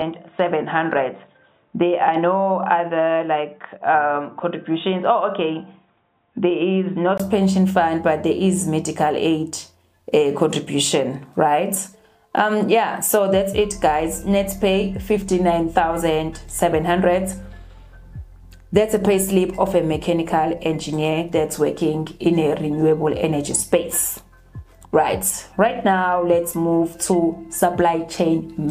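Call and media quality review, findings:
Dull, narrowband sound 0.0–7.2 s, nothing above 3.8 kHz, then opens up to full band. Likely input switched to a poorer device, its narrower capture band. Spectrogram: hard ceiling at 3.8 kHz. Waveform: 20 ms gap at 7.2 s, level steady, faint noise well below signal.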